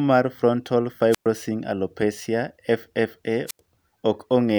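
Wireless microphone squelch dropouts at 1.11–1.26 s, after "mar frontal", and 3.47–3.59 s: the weakening radio link trips the receiver's squelch, giving hiss, then 113 ms and 85 ms mutes.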